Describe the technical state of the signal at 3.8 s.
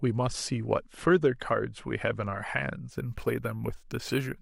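At 3.8 s there is imaging from sample-and-hold upsampling, from 2.92 s to the end. Repeated samples, unsmoothed, mirror the speech into 12 to 24 kHz, about 25 dB down, which fits a 24 kHz source doubled. It sounds like a bright metallic fizz.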